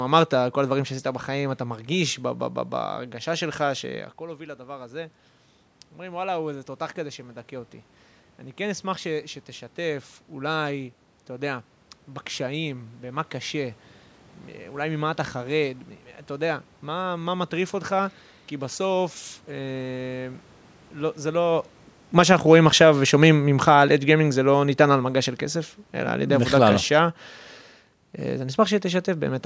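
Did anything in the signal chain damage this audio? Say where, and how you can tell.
Yes. The call processing's automatic gain falling pulls the level down by about 8 dB from 21.36 to 26.81 s. The room noise sinks along with the speech, which separates it from the talker simply moving back from the microphone around 21.5 s.

Inside that dip, automatic gain rising lifts everything by about 4 dB between 22.29 and 23.04 s, a brief swell over less than a second. Because the background rises in step with the speech, this is the gain control finding the input too quiet and raising its gain, not the talker coming closer.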